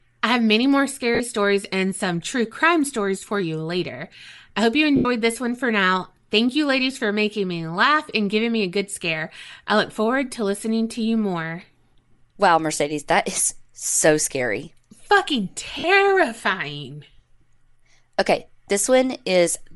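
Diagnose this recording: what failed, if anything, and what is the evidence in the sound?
Bluetooth LC3 compression runs through the whole speech clip at the codec stage. A grainy, breathy edge and noise-filled upper spectrum are plainly audible, which points to a moderate bitrate around 48 kbps and 10 ms frames. The likely cause is LC3 encoding zeroing high bands and substituting noise.

Lost LE Audio frames occur on the wireless link at 1.15–1.21 s (50 ms, between "I have many more" and "stories and some true"), 4.96–5.05 s (90 ms, after "later I hope you", before "this one for now"), and 15.79–15.84 s (50 ms). Each gap is filled by the decoder repeating the last spectrum with randomised signs.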